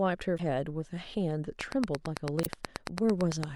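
At 0.36 to 0.40 s, damaged data in the compressed stream makes the decoder lose sync and search for the next frame header, recurring at 2.42 to 2.47 s. From 1.61 to 3.45 s, a train of clicks ticks regularly about 9 times per second, roughly twenty pops of much the same shape standing about 20 dB above the speech, likely from electrical interference rather than decoding errors.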